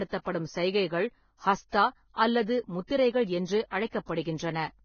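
Right from the start the whole speech track sounds dull and grainy. Nothing reaches above about 6.5 kHz, and what treble is left has turned into a fizzy, hissy texture rather than real detail. Consonants and tonal parts both come across roughened. That's likely Vorbis compression at a very low setting, something around 17 kbps. The codec lowers its cut-off and quantises the upper residue so coarsely that fine structure gets swapped for noise of similar energy, and the damage here is heavy.

At 1.69 s there's pre-echo. A short hiss creeps in for about 42 ms just before a sharp attack, and the attack itself lands a bit soft and smeared. The same thing happens again at 4.22 s, this time spread over about 35 ms. In both spots the attack fell late in a transform block, so the quantisation noise sized for the loud onset got spread back across the quiet stretch ahead of it.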